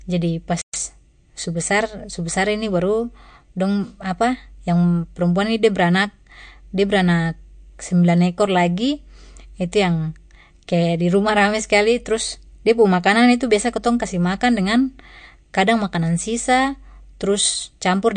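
Throughout, likely MP3 compression at a low bitrate, one that fits about 48 kbps, starves the encoder: nothing above 9.1 kHz, and the speech sounds plainly watery and swirly. From 0.62 to 0.74 s, a playback stall, likely the player running out of data, drops the output to silence for 120 ms before the speech resumes.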